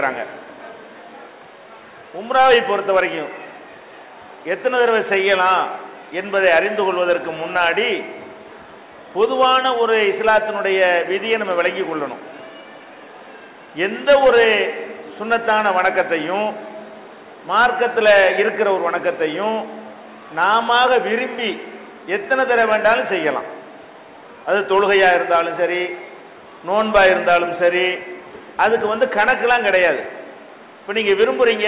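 No faults are present; the band tops out at 4 kHz, which fits a narrowband G.711 mu-law call path working as intended.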